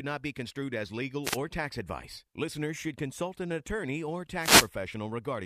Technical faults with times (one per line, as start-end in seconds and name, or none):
1.23-1.38 wireless microphone noise hit
4.38-4.69 wireless microphone noise hit